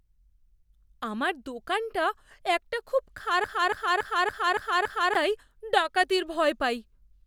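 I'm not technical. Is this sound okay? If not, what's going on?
No. After "আমার দোকানটা একটা খুব", from 3.44 to 5.15 s, a 0.28 s snippet of speech repeats six times. This is a broken-record loop. The player or stream likely stalled and replayed its last piece. The missing speech is lost before "তাই ডাকাতির".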